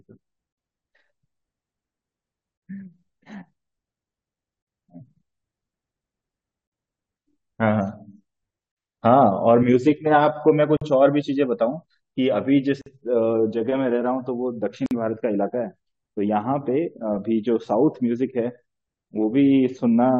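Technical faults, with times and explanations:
0.53, 2.58, 4.62, 6.67, 8.72, 10.77, 12.82 and 14.86 s, gap at a join of encoded pieces: the speech was encoded as separate pieces about 2.0 s long and joined without trimming, so each piece's start-up delay and end padding stay in. At each join a 48 ms hole of silence drops into continuous speech with edges smeared by the codec, then the speech resumes from exactly where it stopped, giving a regular stutter.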